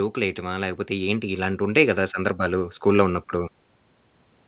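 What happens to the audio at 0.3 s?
The speech and the background behind it begin to swell together, climbing by about 6 dB from 0.15 s to 3.61 s. This is automatic gain rising: the gain control judged the input too quiet and kept raising its gain gradually.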